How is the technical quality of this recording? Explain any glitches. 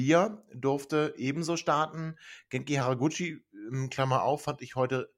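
The recording has one clear glitch: a drift correction step. From 1.36 s to 2.81 s the speech runs about 5.5% fast and its pitch rises by about 93 cents, close to a semitone, then snaps back to normal. This is likely clock-matching software briefly changing the playback rate in a single step to drain or refill its buffer. Because speed and pitch move together, the voice sounds abruptly sharpened and hurried for that stretch.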